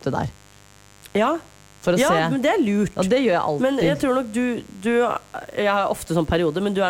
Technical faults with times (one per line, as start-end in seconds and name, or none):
0.00-6.89 mains buzz